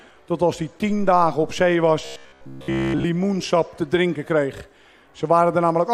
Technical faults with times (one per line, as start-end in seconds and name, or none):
2.05-3.06 robotic sound from repeated short buffers